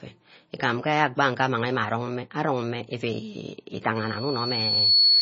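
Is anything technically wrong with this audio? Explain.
Yes, there are two problems.

The whole clip has heavy codec damage, most likely from MP3 compression at a low bitrate, something like 24 kbps. There's nothing above about 7.6 kHz, so the top end sounds dulled. With so few bits, the encoder drops weaker frequency detail and lets it flicker in and out between frames. That gives the speech a watery, swirly quality, with smeared consonant edges and chirpy sibilants.

Then from about 3.95 s right to the end there's a loudspeaker feedback squeal. A mic is hearing its own speaker, and at one frequency, here about 4.4 kHz, the loop gain tops one, so that tone keeps feeding itself. It swells over roughly a second into a steady whistle that ends up around 10 dB louder than the speech underneath it.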